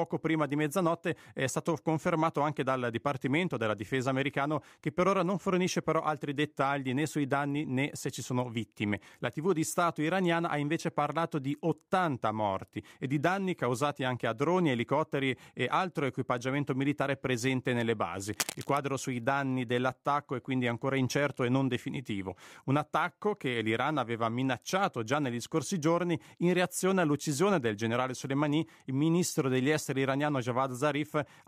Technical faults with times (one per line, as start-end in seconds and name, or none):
18.33-18.78 cable scratch noise